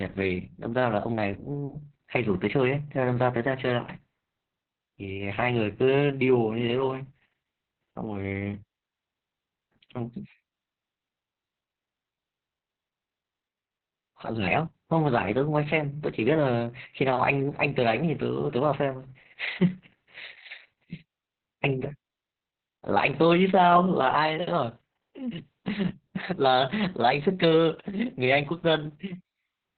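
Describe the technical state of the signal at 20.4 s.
At 20.4 s, as across the whole recording, the speech carries heavy Opus voice compression: a low-rate narrowband SILK coder, fitting roughly 6 kbps, codes the excitation coarsely, so it sounds muffled, hoarse and faintly robotic. A spectrogram shows a flat ceiling near 4.4 kHz.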